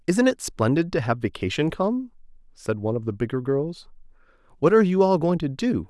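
Nothing goes wrong anywhere in this stretch of speech, so there's no fault to point to at any moment.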